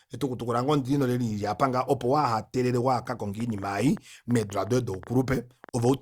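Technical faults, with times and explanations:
3.40 to 5.90 s: train of clicks. Over this speech, about twenty similar clicks arrive at roughly 7.2 per second, unevenly spaced and about as loud as the speech itself. The same clicks carry on into the pauses, which separates them from mouth clicks or clipping, and likely comes from interference or a faulty connection.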